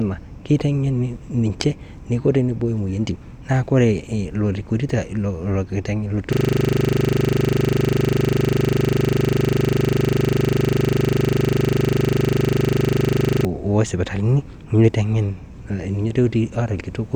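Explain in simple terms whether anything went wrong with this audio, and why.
A system hang loop, 6.33 to 13.45 s: the computer froze, replaying one 40 ms scrap of speech exactly, 25 times a second. That makes a steady buzz, not a silent dropout.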